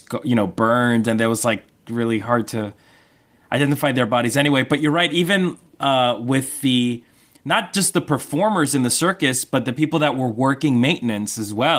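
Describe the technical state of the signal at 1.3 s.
At 1.3 s the speech is intact, with no dropout, click, distortion or other fault, and the Opus voice coding shows only light coding damage at this point.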